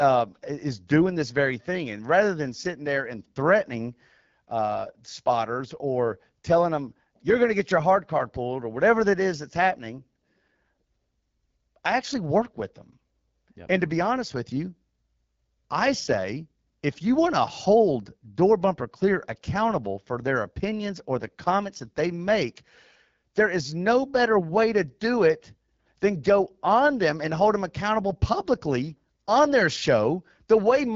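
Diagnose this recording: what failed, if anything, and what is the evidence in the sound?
The failure is at the codec stage: the speech went through the AMR wideband (HD Voice) codec at a very low rate, which fits AMR-WB at 8.85 kbit/s. Throughout, the speech sounds rough and raspy, its top band is filled with shaped noise, and nothing reaches above 7.5 kHz.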